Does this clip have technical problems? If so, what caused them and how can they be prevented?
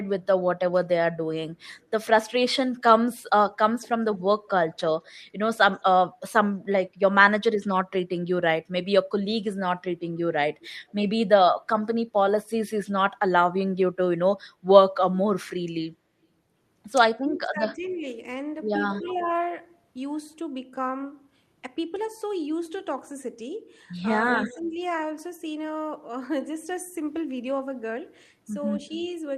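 Yes. Speech suppressed in double talk: when both sides talked at once, the echo canceller likely could not tell this talker from loudspeaker echo and turned both down. Speech dips between 0.0 and 7.53 s (deepest about 30 dB, under half a second in total), 17.22 to 19.21 s (about 15 dB, roughly 0.7 s) and 24.53 to 24.77 s (about 5 dB). A canceller with better double-talk detection, or a headset, prevents this.

Echo leak: the far end's canceller likely left part of its loudspeaker pickup in the signal, sending a faint delayed copy back. It appears at 3.81 to 5.82 s (211 ms delay), 10.63 to 10.92 s and 17.9 to 19.18 s (244 ms), and 24.28 to 24.69 s and 28.87 to 29.08 s (189 ms), about 20 to 30 dB below the speech. Headphones or lower loudspeaker volume at that end prevent it.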